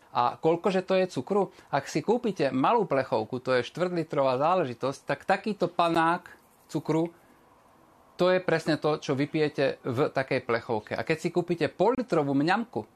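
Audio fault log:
5.95 s and 11.95–11.98 s: gap between stream segments. Silent holes of about 12 ms and 28.5 ms at 6 s segment boundaries, seen as flat silent waveform stretches and hard-edged vertical blank columns.
11.03 s: bit error spike. A single flipped-bit sample jumps and returns, heard as one sharp tick; a one-sample waveform spike and thin full-band spectrogram line.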